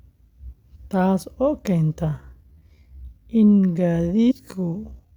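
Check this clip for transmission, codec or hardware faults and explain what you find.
Two kinds of fault are present: skipped compressed frames, twice, and a time-stretched section running from 2.03 s to the end.

Compressed frames skipped occur at 0.75 to 0.77 s and again at 4.30 to 4.32 s. Whole frames never reached the output, either lost from the file or rejected by the decoder. The jumps fit a frame length of 23.2 ms. The first gap points to about ten frames, roughly a fifth of a second of speech. The second points to about seven frames.

A time-stretched section runs from 2.03 s to the end. The pace drops abruptly to about 0.59 times the original speed while the pitch holds steady. Software likely lengthened the audio to fit a target duration, repeating short pieces to keep the pitch. The transition at 2.03 s is a sudden slowing.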